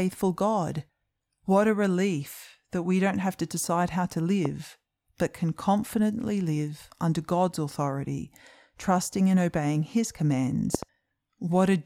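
At 4.45 to 4.48 s, just after "to decide how to", a loud pop jumps about 10 dB above the speech. At 10.75 to 10.85 s, two pops follow in quick succession, about 15 dB up. Each is likely a sudden voltage spike. The speech continues underneath.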